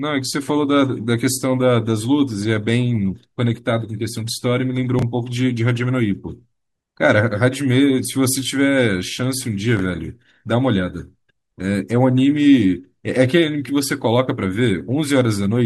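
At 4.99 to 5.02 s and again at 9.77 to 9.80 s you get chunks out of order: a roughly 10.7 ms slice of the speech lands two chunks late, after material meant to follow it. Nothing drops out, but the three hard joins give a quick jumbled moment.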